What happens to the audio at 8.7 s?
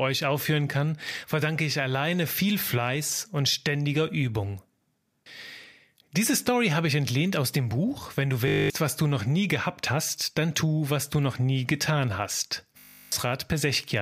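A system hang loop runs from 8.48 s and ends at 8.7 s, where normal playback resumes. The computer or its audio driver stalled while the sound hardware kept replaying the same 20 ms stretch of its ring buffer, eleven times in a row. Because that loop is so short, it repeats at 50 Hz and comes across as a flat, steady buzz rather than a stutter. About a fifth of a second of the speech is lost beneath it.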